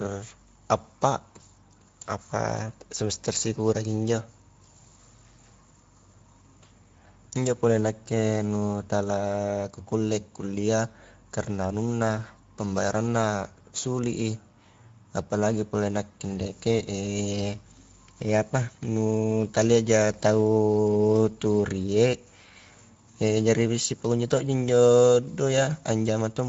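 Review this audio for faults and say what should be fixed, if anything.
Speex codec damage runs throughout: hoarse, noisy speech suggesting roughly 17 kbps, with nothing above 7.6 kHz, shown as a hard spectrogram ceiling and smeared harmonics. Prevent it by capturing or transmitting with a higher-quality codec setting.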